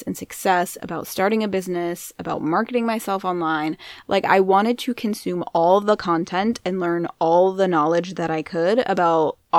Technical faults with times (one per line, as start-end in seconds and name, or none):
none